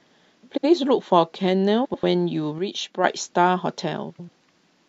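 Speech, with frames out of order in three places: adjacent blocks of frames were decoded in swapped order at 0.51–0.65 s (halves of about 70 ms, fitting three frames each) and at 1.84–2.03 s and 4.10–4.29 s (halves of about 93 ms, fitting four frames each). Each stretch plays its halves exchanged, heard as a garbled flutter. From 2.59 to 3.04 s one channel likely drops out, so after mixing to mono the sound falls abruptly by about 6 dB.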